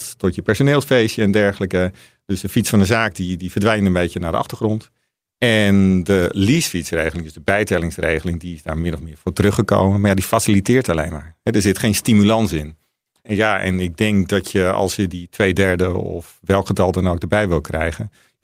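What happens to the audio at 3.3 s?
Nothing goes wrong at 3.3 s; the speech there plays through intact, with no dropout, click, distortion or other fault at that moment.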